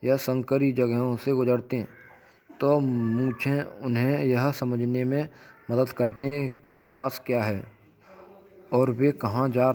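From 6.03 to 6.62 s there is repeated packet loss, giving a robotic sound. Several short holes, the longest about 120 ms, are patched by stretching the last sound. Roughly half this span is synthetic fill, so the speech turns choppy.

Right after, from 6.63 to 7.06 s, the sound freezes into a continued buzz or hiss lasting about 400 ms, with no silence. The original audio under it never plays. A long network dropout is the likely cause.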